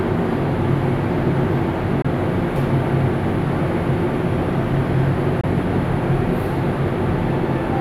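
At 2.02 to 2.06 s and again at 5.41 to 5.45 s, the sound cuts out abruptly, and resumes further along as if it had kept playing. These short gaps point to a Bluetooth dropout, likely a single late packet of about 23 ms discarded each time.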